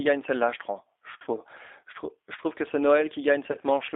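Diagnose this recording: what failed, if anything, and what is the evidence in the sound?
The codec stage is at fault: G.729, at 8 kbit/s, throughout. Nothing passes below 300 Hz or above 3.6 kHz. The speech sounds rough and synthetic, and the damage is plainly audible. The decoder rebuilds each frame from a vocal tract filter, a pitch predictor and a few pulses, not the true waveform.

The network stage dropped packets, and the speech codec concealed them. The first gap runs from 1.22 to 1.28 s and the second from 3.52 to 3.57 s. They last about 50 ms and 20 ms, which fits five and two 10 ms frames. The decoder extended its last pitch and filter with falling gain, so the sound smears into a fading buzzy tone or coloured noise.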